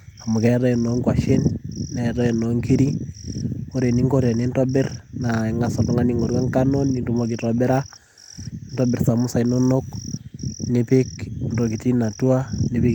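No technical faults can be heard anywhere in the speech. There is nothing at any point in the recording that needs a timestamp.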